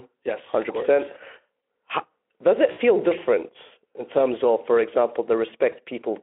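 A speech clip carried over a narrow telephone band, with the light hoarseness of Speex coding. VoIP packet loss concealed by the speech codec occurs twice. From 2.71 to 2.79 s, 60 ms of audio is lost. From 5.71 to 5.76 s, 20 ms is lost. Each time, the decoder extends the last sound into a buzzy tone or coloured noise that fades. The voice stays weak briefly after the gap.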